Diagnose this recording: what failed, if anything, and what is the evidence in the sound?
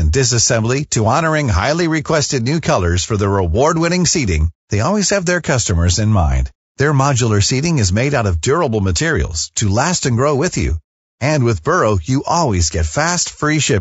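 Across the whole speech clip the voice sounds rough and grainy, with a hiss-like fill between the harmonics and a dull or artificial top band. The failure sits at the codec stage, most likely low-delay AAC compression of the AAC-ELD kind used for calls. Its short frames resolve pitch harmonics poorly, so the bits run out and noise fills the gaps. The plainly audible damage fits a bitrate around 32 kbps.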